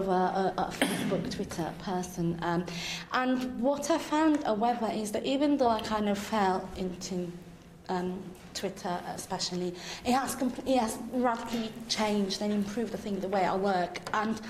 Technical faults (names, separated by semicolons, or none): none